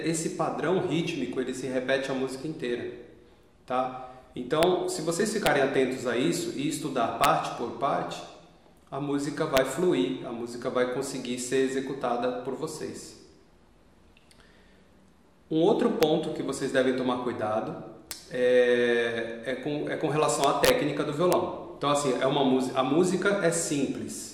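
Sharp cracks at 4.63, 5.46, 7.24, 9.57, 16.03, 18.11, from 20.44 to 20.70 and at 21.33 s are integer overflow. Peaks pushed up to about 3 dB past the limit wrap to the opposite sign instead of clamping, so each one snaps violently, harsher than clipping.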